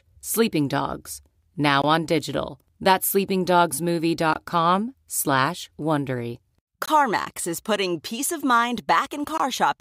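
Speech with a gap between chunks: four 20 ms silences at 1.82 s (before "on digital"), 4.34 s, 6.86 s (before "is putting peace of") and 9.38 s (after "putting peace of mind"), spaced every 2.5 s at the joins between sections of audio.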